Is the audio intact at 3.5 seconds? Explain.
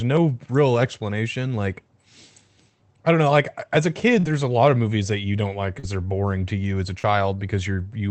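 Yes, the speech at 3.5 s is intact, passing through the call path with its top end stopping near 8 kHz.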